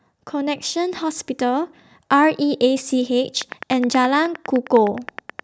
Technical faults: automatic gain rising; train of clicks

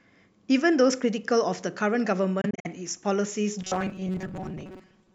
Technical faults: Bluetooth dropout; robotic sound from repeated short buffers

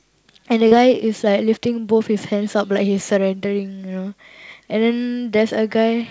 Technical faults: short concealed packet loss

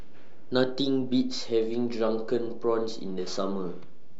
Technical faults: DC offset

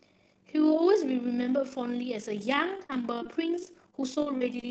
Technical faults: overlap-add ripple; repeated packet loss (robotic sound)

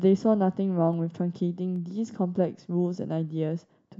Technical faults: dropped samples

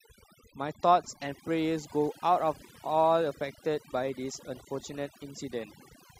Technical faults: overdone noise removal; clock slip clicks

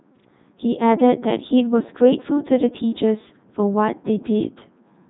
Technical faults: Codec 2 vocoder

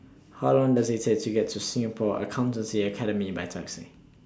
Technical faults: none

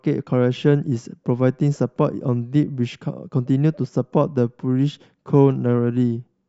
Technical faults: none

